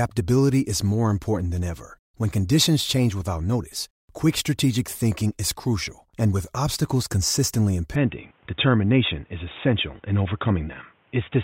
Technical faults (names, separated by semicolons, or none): input switched to a poorer device